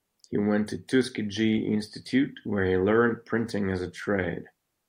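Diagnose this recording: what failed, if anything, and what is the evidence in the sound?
Nothing failed here: the speech runs without a single dropout, click, glitch or level jump anywhere along the chain, so there's simply no fault to diagnose.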